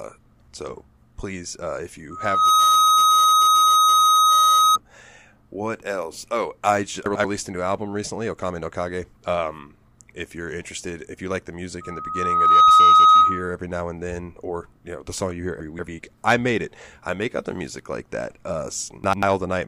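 At 2.1 s a microphone starts picking up the loudspeaker it feeds, and the loop gain climbs past one at 1.3 kHz. The result is a loudspeaker feedback squeal: a pure tone that swells over roughly 0.4 s to around 10 dB above the speech, then rings on until 4.78 s.

From 7.06 to 7.25 s, just before "a new album recently", chunks play out of order. One block of about 93 ms reaches the output a chunk late and plays after the block that should follow it. No audio is lost, but the speech jumbles for a moment across the hard joins.

After "if you like the", the feedback loop runs away again at 1.3 kHz from 11.81 to 13.56 s. This time it builds more slowly, over roughly 0.7 s, and peaks louder, around 15 dB over the speech, before "now and then or" returns.

Between 15.6 and 15.88 s, after "the song you hear" and before "I made it I", a 93 ms chunk arrives two chunks late. The scramble is longer.

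A last out-of-order chunk, one block late, garbles 19.04 to 19.23 s the same way.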